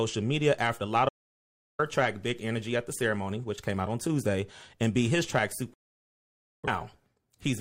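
At 1.09 s, just after "media after", the speech cuts to silence for 0.7 s. This audio dropout to silence likely came from lost input while recording continued.

At 5.74 s, after "and beat his track", a digital broadcast dropout mutes the speech for about 0.9 s. The receiver lost valid frames and went silent until they returned.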